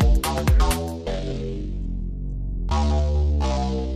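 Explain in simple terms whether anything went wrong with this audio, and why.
A time-stretched section runs from 0.8 s to the end: the sound suddenly slows to half speed, keeping its pitch but dragging, likely from software repeating short pieces to lengthen it.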